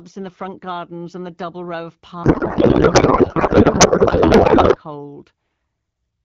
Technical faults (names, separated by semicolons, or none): codec payload misread